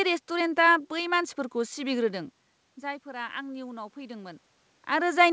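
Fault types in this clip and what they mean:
Automatic gain rising: after "रेस्टुरेन्टा बै मानसिफोरखौ" the input drops by about 14 dB as the talker moves away. The gain control responds by gradually lifting its gain about 4 dB from 2.04 to 5.02 s, swelling the voice and room noise together.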